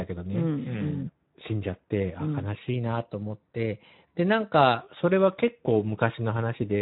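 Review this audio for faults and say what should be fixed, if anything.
The speech carries Speex codec damage throughout. It sounds plainly hoarse and noisy. Nothing is present above 3.8 kHz. The thin excitation coding points to a low setting, around 11 kbps. Encode at a higher Speex quality, or use a wideband codec.

From 2.74 to 4.81 s, speed rises about 5.7% and pitch rises about 96 cents, nearly a semitone. Both then snap back together. This is likely a drift correction step, where clock-matching software jumped its playback rate to settle its buffer. Use gradual, inaudible rate adjustment for clock drift instead of single steps.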